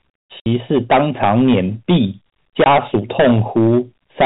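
A stage in the chain is overdriven by about 14 dB throughout, so roughly a tenth of the samples exceed what it can pass and their peaks are cut flat. This hard clipping adds harmonics far above the speech, giving every loud syllable a harsh, crackling fuzz. At 0.40 to 0.46 s, packets are lost and the receiver plays silence for 60 ms, which fits three 20 ms packets. A second gap of 20 ms, consistent with a single packet, comes at 2.64 to 2.66 s. This packet loss filled with silence chops holes in the speech with abrupt edges, and the G.711 telephone coding passes nothing above 4 kHz.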